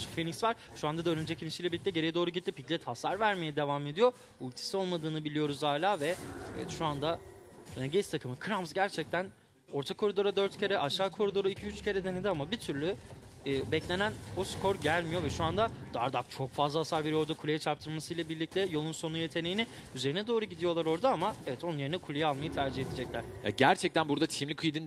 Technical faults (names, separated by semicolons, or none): clock drift between sender and receiver; repeated timing corrections